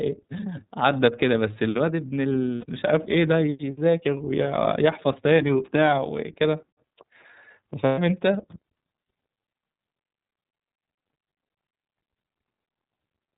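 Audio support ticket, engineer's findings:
Narrow, slightly rough and synthetic speech throughout, with nothing above 4 kHz. Probable component: iLBC codec, damage plainly audible. Each frame's excitation is coded independently, costing naturalness. Running in the 30 ms frame mode at 13.33 kbps.

Held, buzzy vowel-like smear at 2.55–2.65 s (about 90 ms), then clean recovery. Probable component: lost iLBC frames, fitting three missing 30 ms frames. The decoder repeats the last pitch cycle mixed with noise.

Same buzzy hold at 7.85–7.99 s, longer at about 120 ms, consistent with four lost frames. The speech returns almost immediately because iLBC frames stand alone.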